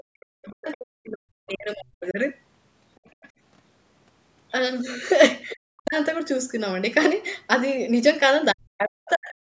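From the start to 2.19 s, the speech is suppressed in double talk. It dips hard, by around 40 dB at its deepest. The likely cause is an echo canceller that turned everything down while both sides spoke.

Inside that stretch, at 0.45 to 0.52 s, the other side's voice leaks through as a very faint scrap. It comes back at 3.05 to 3.29 s, somewhat louder, and again at 5.5 to 5.56 s, louder still. Likely, loudspeaker echo was not fully removed from the microphone.

From 5.55 to 5.96 s, the talker is suppressed again. It sinks deeply. The same happens from 8.52 s to the end, with the speech again dipping by around 40 dB.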